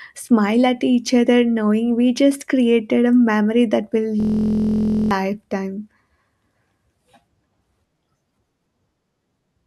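At 4.20 s the speech locks into a system hang loop until 5.11 s. The driver or system stalled, but the sound hardware kept replaying its ring buffer. One slice of about 23 ms repeats exactly, dozens of times. That length fits a 1024-sample buffer. At this size the repeats fuse into a steady buzz at about 43 Hz, not a stutter. When playback resumes, roughly a second of the speech is gone.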